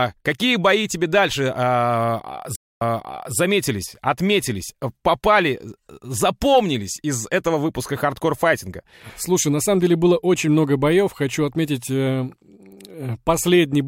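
At 2.56 s the speech cuts out and there is a stream reconnect lasting until about 3.36 s. Around 0.25 s of silence follows the break, after which playback resumes roughly 0.56 s earlier than where it stopped, so a short stretch of speech is heard twice. The pattern points to a dropped connection: the player reopened the stream, the server resent a recent burst, and a fresh decoder restarted mid-stream from that earlier point.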